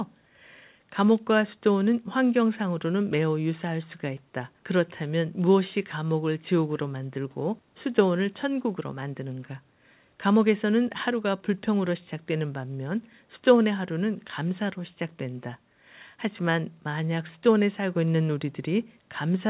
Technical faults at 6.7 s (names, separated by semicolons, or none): none